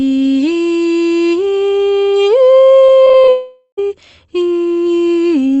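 Repeated packet loss (robotic sound) runs from 2.85 to 3.29 s. Short holes keep opening in the music, the longest about 31 ms, and each is patched by extending the preceding sound. About a quarter of that span is concealed, giving a choppy texture with pieces missing.

A long network dropout, likely the cause, follows from 3.29 to 3.87 s. The last sound stretches into a fading buzz or hiss for roughly half a second, then about 40 ms of silence. The music resumes with that stretch missing.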